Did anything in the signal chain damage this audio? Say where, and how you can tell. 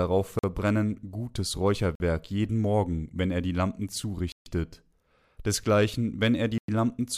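Yes. The speech cuts to hard silence four times: about 46 ms at 0.39 s, 48 ms at 1.95 s, 141 ms from 4.32 to 4.46 s, and 103 ms from 6.58 to 6.68 s. This points to the playback stage, with a Bluetooth stall the likely cause: interference delayed packets, the headphones' buffer ran empty, and output paused until the resent data arrived. Network packet-loss concealment would fill such gaps with smeared or repeated sound, but these gaps are clean silence with abrupt edges.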